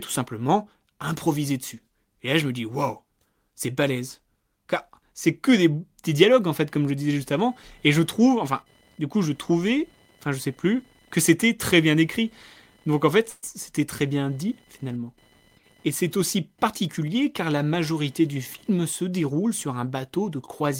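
From 6.5 s to the end, computer activity noise adds a buzzing whine pulsing at around 1 kHz, roughly 35 dB below the speech. It tracks the computer's activity on the shared ground, not the speech itself. At 13.29 to 13.45 s a call audio freeze stretches the last sound into a fading tail for 132 ms, likely from a jitter buffer running dry. The speech then resumes where it stopped, delayed by 132 ms with nothing missing, unlike a dropout that deletes audio.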